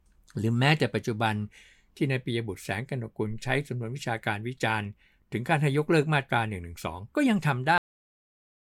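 A cut-off end at 7.78 s stops this speech recording mid-sound: the signal falls straight to digital silence with no natural decay, and that silence fills the remaining 0.96 s. The final stretch of audio was never written out or played back, so the recording ends on whatever sample the truncation happened to land on rather than on a completed sound, which is why the ending feels abrupt instead of trailing off.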